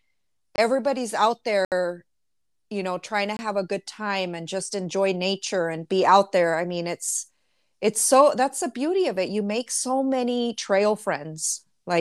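Short holes cut the speech at 0.56 to 0.58 s, 1.65 to 1.72 s and 3.37 to 3.39 s: blocks of digital silence, where the audio cut out without a fade. The two 23 ms gaps fit a 1024-sample buffer left unfilled; the middle gap lasts 70 ms.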